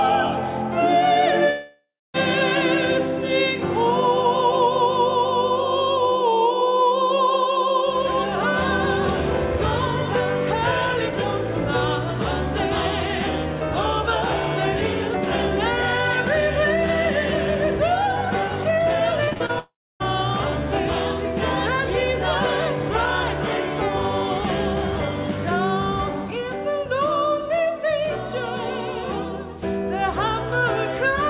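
At 1.5 s the last sound smears into a fading buzz or hiss, then there's about 0.29 s of near silence before things resume at 2.16 s, with roughly 0.64 s of material simply gone. That's likely a long network dropout, where nothing arrived and the receiver padded the hole.

From 19.24 to 19.51 s there's repeated packet loss: five short holes, the longest 36 ms, each patched by stretching the previous sound. Nearly half that stretch is filler, so it comes out choppy, with pieces missing.

Right after, from 19.59 to 20.02 s, there's the same fade-then-silence pattern with about 0.42 s missing, likely a second long network dropout. All of it sits in narrowband audio with nothing above 4 kHz, which fits a G.711 call path at 64 kbps.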